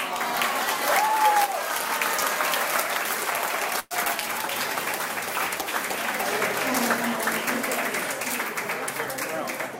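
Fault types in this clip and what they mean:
Burst of packet loss: around 3.79 s a run of audio never arrived, so the last bit gets stretched and faded for about 110 ms, a short 20 ms silence follows, then playback picks up with roughly 120 ms skipped.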